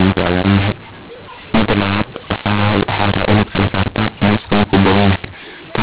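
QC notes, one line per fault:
throughout, mu-law and A-law mixed up: speech coded as mu-law is decoded as A-law, scrambling sample levels and lifting near-silent samples well above zero. It sounds harsh and distorted, with pauses full of hiss. The waveform shows jagged peaks and no flat gaps, and the spectrogram shows broadband noise filling the band up to 4 kHz.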